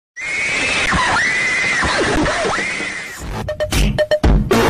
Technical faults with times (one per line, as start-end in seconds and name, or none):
0.86 underrun with held sample
2.16 underrun with held sample